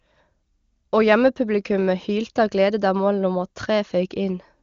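No technical faults can be heard anywhere in this speech. It has passed through an AMR wideband (HD Voice) codec at its top rate of 23.85 kbit/s, and any coding damage is at most faint.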